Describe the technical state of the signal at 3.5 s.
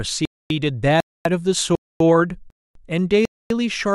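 Right at 3.5 s the speech is just coming back from a gap between chunks that opened at about 3.25 s, so you're landing on the tail end of a 250 ms hole. The audio seems to arrive in half-second chunks, and here there's dead silence at the join. Nothing is actually dropped; the speech simply stops cold and then picks up again.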